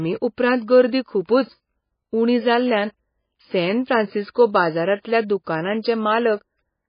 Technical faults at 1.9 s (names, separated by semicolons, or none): MP3 compression